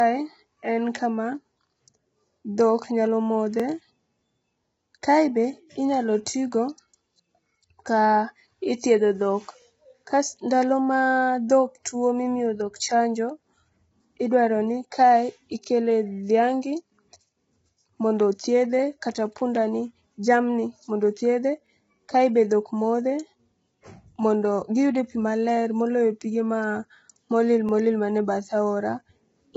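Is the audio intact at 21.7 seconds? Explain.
No. From 21.67 to 21.69 s a stretch of about 23 ms plays twice because of overlapping chunks: the next chunk starts before the previous one finished, which fits 6-second processing chunks. The result is a brief click or stutter. On the waveform the repeated cycle shows as a sudden step where the shape restarts. On a spectrogram a thin vertical broadband line appears at the join.

This moment also carries the roughness heard across the whole clip. The sound is grainy, with noise filling the gaps between harmonics. That is heavy damage, likely from low-delay AAC compression (AAC-ELD) at a rate around 16 kbps. A spectrogram would show smeared harmonics and a hard ceiling with nothing above 7.8 kHz.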